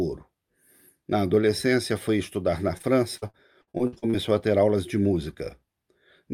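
From 2.77 s to 4.15 s the speech breaks into a run of repeated packet loss with a robotic sound. Around ten short holes arrive in quick succession, the longest about 57 ms. Each is patched by stretching the preceding sound forward, so roughly a quarter of that stretch is synthetic fill. Because each gap follows the last so closely, the fill keeps recurring, giving a choppy, robotic texture with fragments missing throughout that span.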